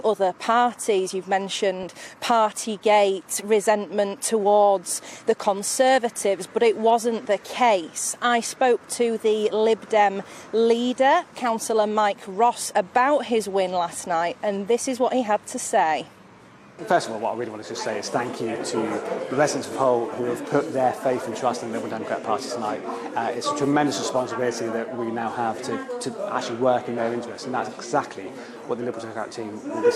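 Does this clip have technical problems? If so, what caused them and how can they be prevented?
Yes. DAB burbling at 1.83 s: brief noise blips from bit errors that slipped past error correction. Corrupted scale factors make single sub-bands jump in level, rather than dropping out to silence. A better antenna or stronger reception would prevent it.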